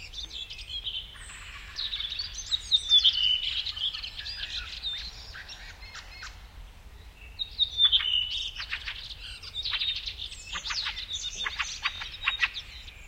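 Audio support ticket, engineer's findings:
Bluetooth stutter, 6.09–6.13 s. Link drop on the Bluetooth receiver; last buffer replayed until data resumed. Short repeated slice, then sound jumps ahead. Gap of about 23 ms, consistent with one lost frame.

Bluetooth stutter, 11.96–12.03 s. Same receiver-side loss, longer. Slice repeats back to back into a brief buzz, then sound picks up later as if it had kept playing. About 46 ms missing, which fits two consecutive lost frames.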